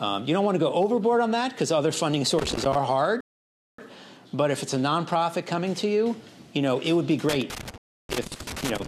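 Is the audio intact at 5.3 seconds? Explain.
Yes, at 5.3 seconds the audio runs on cleanly, with no dropout, click, distortion or other fault at that point.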